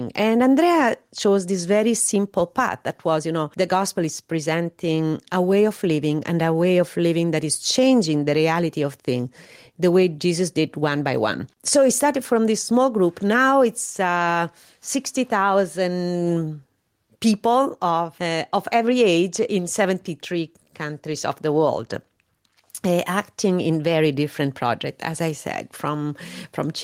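Gain pumping runs through the whole recording: the gain ducks by around 5 dB whenever the speech gets loud. This is likely a fast limiter or compressor fighting input gain set far too high, squashing loud and soft passages together.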